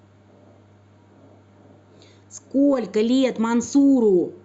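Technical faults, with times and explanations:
No technical faults can be heard in this speech.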